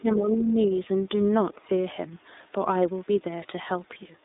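From 0.00 to 0.76 s, speech is suppressed in double talk. The echo canceller was likely caught with both ends talking at once and, unable to tell this talker from the returning loudspeaker echo, pulled the level down on both. The voice sags by roughly 15 dB at its deepest and thins out in patches, with about half a second of that opening stretch sounding dipped or partly cut away before it steadies.

Throughout the clip, the speech passes through the iLBC codec, which codes each 30 ms frame on its own at a rate that points to the codec's 13.3 kbps mode. The line band runs only from about 250 Hz to 3.7 kHz, so the voice sounds boxed in and lacks both low body and upper brightness. The coding damage is plainly audible as a rough, slightly synthetic buzz on the voice.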